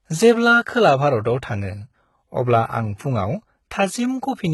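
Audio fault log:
Throughout, HE-AAC compression: s sounds are heavily gritty and lispy, nothing above 11.8 kHz, likely treble copied up from lower bands, fitting a bitrate near 16 kbps.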